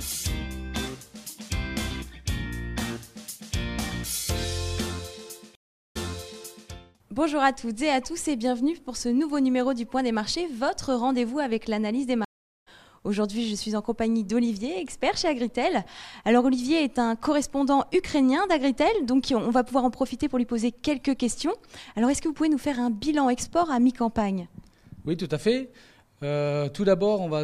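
At 5.55 s a stream reconnect occurs. The connection drops, the player goes silent, then reconnects and starts a fresh decoder mid-stream. About 0.4 s of silence ends at 6.70 s, and playback resumes 0.74 s earlier, so a short stretch of sound repeats. A second stream reconnect runs from 12.25 s to 12.68 s. After about 0.42 s of silence the audio picks up roughly 0.4 s later, skipping that material. Each restart comes in muted or faded.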